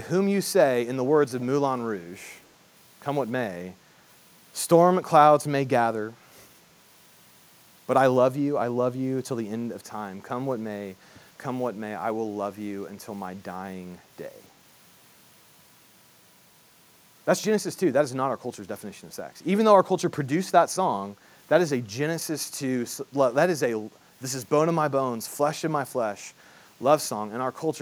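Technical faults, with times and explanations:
2.19 to 2.51 s, echo leak: a very faint copy of the speech trails it by 284 ms, roughly 40 dB down. Likely the other end is on a loudspeaker and its echo canceller let a scrap of its own mic pickup back down the line.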